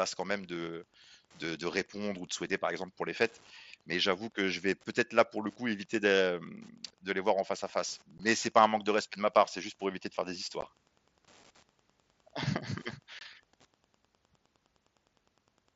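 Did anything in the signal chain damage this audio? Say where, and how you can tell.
Yes. In the analogue wiring, a nearby Wi-Fi radio is being rectified by the audio circuit. This Wi-Fi interference lays a steady tick roughly ten times a second under the speech for the whole clip, about 35 dB below it, matching a 102.4 ms beacon.

On the Bluetooth headset link, unconcealed Bluetooth headset packet loss drops the signal to abrupt holes. The first, 15 ms long, falls at 8.18 s, between "en face à face" and "c'est pas un manque". A second 15 ms gap follows at 10.61 s, just after "éviter de faire des". The last runs from 13.19 to 13.21 s. Each gap fits a few lost mSBC frames with nothing filled in.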